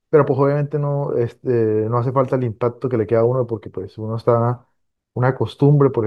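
Speech, with no technical fault to be heard anywhere in the recording. Nothing in the signal path calls attention to itself at any point.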